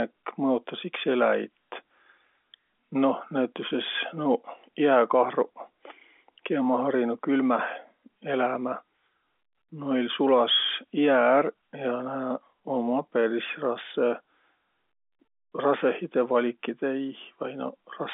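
No faults found: the speech sits in the usual telephone band of about 250 Hz to 3.5 kHz with nothing above roughly 3.7 kHz, as expected of G.711 A-law line coding.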